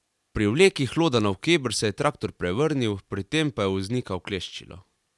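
No technical faults can be heard anywhere in this recording, with the signal holding steady throughout its run.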